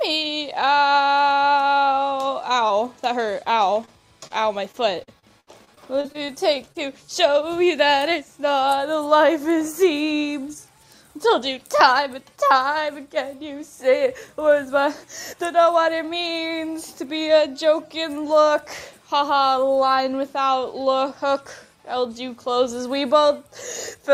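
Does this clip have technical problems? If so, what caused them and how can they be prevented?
Yes. Short concealed packet loss occurs at 2.67–2.71 s, 3.85–3.89 s, 4.27–4.41 s and 6.72–6.76 s. Each time, about 20 ms of audio failed to reach the decoder in time, which fits a lost 20 ms packet. The receiver covered the hole by extending the preceding sound and then blending back, leaving a brief smear or wobble. A larger adaptive jitter buffer and forward error correction on the call would prevent this.

Repeated packet loss (robotic sound) runs from 4.72 to 6.30 s. Around nine gaps fall close together, the longest about 66 ms, and roughly a sixth of the stretch is filled in rather than received. Because each patch continues the last sound before the next loss arrives, the audio turns choppy, with pieces missing. Fixing the congested or unstable network link, for example by using wired rather than Wi-Fi and prioritising call traffic, would prevent it.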